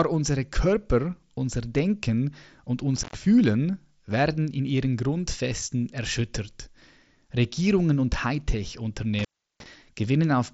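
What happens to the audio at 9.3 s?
A loose connection in the cable or plug is briefly opening, an intermittent contact fault running from about 9.19 to 9.66 s. The line stays open for roughly 0.36 s of that span, so the sound drops out rather than fading, with crackle where the contact breaks and again where it reseats. While the circuit is open only a faint hiss remains in place of the speech, which is carried over a Bluetooth mSBC headset link capped near 7.7 kHz.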